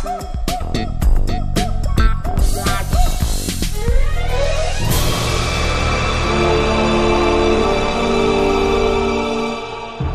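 No technical faults can be heard anywhere in the signal.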